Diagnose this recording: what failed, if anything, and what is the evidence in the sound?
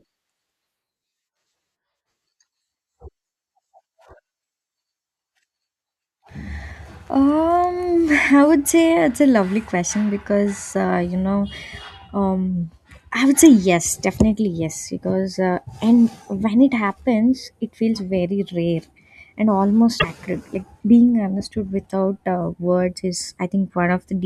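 At the codec stage, damaged data in the compressed stream made the decoder misread frames and lose sync. From 19.98 to 20.05 s, just after "feels very rare and", the speech breaks into a short glitch while the decoder searches for the next valid frame header.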